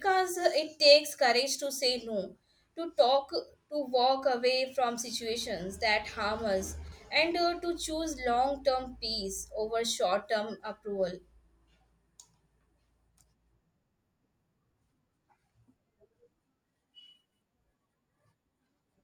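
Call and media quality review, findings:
Chunks out of order, 6.84 to 6.92 s, between "situations that harm us" and "and uh to choose". Short jumbled stutter. Probable component: receive-side reassembly or jitter buffer. One 40 ms chunk played one slot late, swapping two adjacent chunks and leaving three hard joins. Unlike a dropout or concealed loss, there is no gap, muffling or repeated sound. All the audio is present, only misordered.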